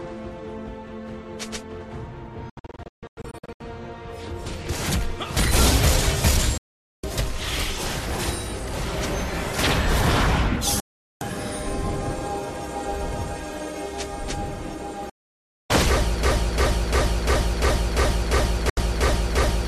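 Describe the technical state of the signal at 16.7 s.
At 16.7 s the signal is caught in a broken-record loop, from 16.23 s to the end. The stream likely stalled and kept resending its last held fragment, so a 0.35 s slice repeats exactly, back to back, ten times, replacing the audio that should follow.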